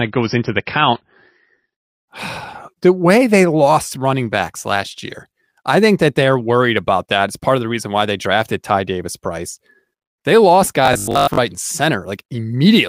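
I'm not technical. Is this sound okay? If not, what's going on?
No. For the first 2 seconds there's an adaptive stream starting at a low bitrate: the player began on a cheap, low-quality version to start quickly, then switched up. Until then the voice sounds dull, with nothing above about 5.8 kHz, before clarity suddenly returns.

From 10.86 to 11.38 s there's robotic sound from repeated short buffers, likely caused by fresh audio arriving too slowly, so the player kept replaying tiny snippets. Most of that stretch is repeats, giving a rigid, metallic 50 Hz buzz.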